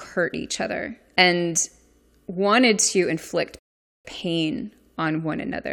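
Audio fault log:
3.59–4.05 s rebuffering stall: the speech drops to silence for 0.46 s, then resumes exactly where it stopped, because the player ran out of downloaded audio and waited for more.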